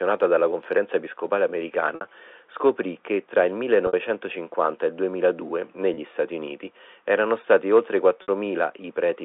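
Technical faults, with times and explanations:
1.95–2.01 s, 3.87–3.93 s, 5.94–5.97 s, 8.22–8.28 s: packet loss with pitch repetition. Three gaps last 60 ms and the one at 5.94 s lasts 30 ms, which points to 30 ms packets over a telephone-band line. At each gap the receiver loops the last pitch period of the sound to cover the hole, fading it out over about 50 ms, so the speech briefly holds on a slightly buzzy tone that fades, toward silence in the longer 60 ms gaps, before the real signal resumes with a short cross-fade.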